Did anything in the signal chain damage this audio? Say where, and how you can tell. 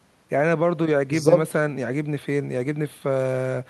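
No, nothing in the signal chain audibly damaged this speech recording. No stage from capture through to playback leaves any mark that can be heard in the sound.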